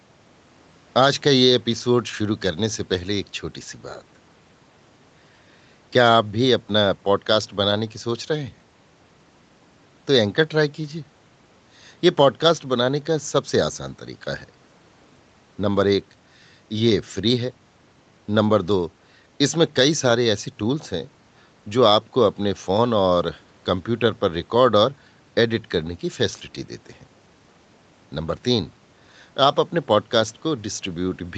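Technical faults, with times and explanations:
No technical faults are present in this speech clip.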